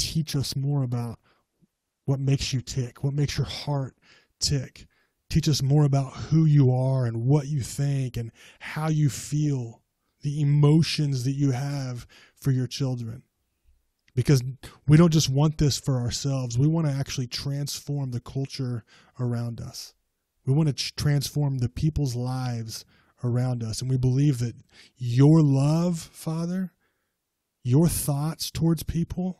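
For the first 4.0 seconds the speech sounds dull and thin, with the treble missing or replaced by a hissy, synthetic top and clear codec smearing. Then, with no gap, the sound suddenly turns fuller and brighter. This is an adaptive stream starting at a low bitrate: the player began on a cheap version, which fits Opus at around 16 kbit/s, and switched to a better one, consistent with about 64 kbit/s, once the connection was measured.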